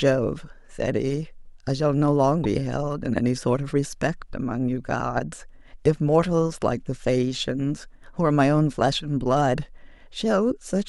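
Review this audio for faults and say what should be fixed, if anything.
Damaged data in a compressed stream at 2.44 s: a brief blip cuts into the speech where some of the compressed bytes were corrupted or lost. The decoder misread the frame there, lost sync and had to find the next valid frame header. Prevent it by checksumming files and streams in transit and storage, so corrupted data is caught and resent before decoding.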